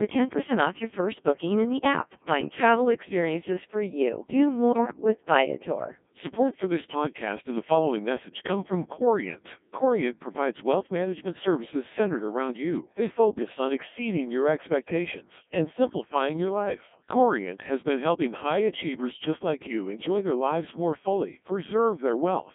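Throughout, the speech passes through the Codec 2 vocoder, band-limited to 200 Hz to 3.5 kHz. Its buzzy, robotic tone, which fits about 1.6 kbit/s, is heavy resynthesis from pitch and envelope, not lossy-codec smearing. From 4.72 to 5.04 s, bit errors on digital voice radio make pitch, level and timbre jump into warbles and bleeps. That fits a few percent of bits flipped across about six frames, unlike dropouts, which leave silence.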